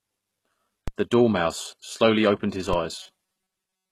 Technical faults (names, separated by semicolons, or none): HE-AAC compression; DC step; robotic sound from repeated short buffers